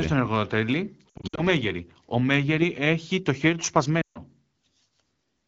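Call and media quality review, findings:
Lost AMR speech frames, 1.10–1.41 s: repeated short warbles and gain dips, about 180 ms lost in scattered gaps over 280 ms, longest run 60 ms. Decoder repeats last pitch and vocal-tract state with decaying gain.

Lost AMR speech frames, 4.01–4.19 s, just after "έχει το χέρι του": about 140 ms of speech fading to near silence, consistent with roughly seven 20 ms frames. Concealment drops to near silence within two frames.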